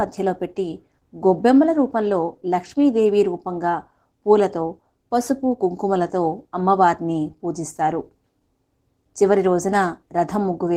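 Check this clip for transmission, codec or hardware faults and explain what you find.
One fault runs throughout the speech: Opus voice compression, audible from start to finish. Hybrid coding, linear prediction below 8 kHz with a transform layer above, at a rate around 16 kbps, leaves the voice hoarse and slightly robotic; spectrograms show smeared, blocky upper bands.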